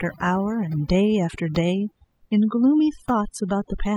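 A speech clip with overdone noise removal across its whole length: a noise reduction stage was pushed too hard, so it cuts individual frequency bands down or off whenever they sit close to its noise estimate, and the quieter parts of the voice get removed along with the noise. The result is a background that drops and breaks up into small twinkling specks.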